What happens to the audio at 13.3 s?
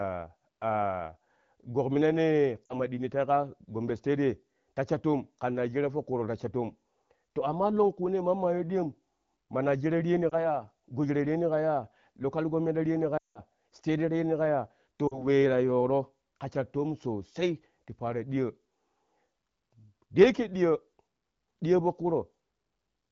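Around 13.3 s there's a run of lost AMR speech frames, about 180 ms from 13.17 to 13.41 s. The wideband decoder fills the gap by stretching the last good pitch and vocal tract settings with dropping gain, so the sound fades quickly to silence, and comes back weak or rough for a moment.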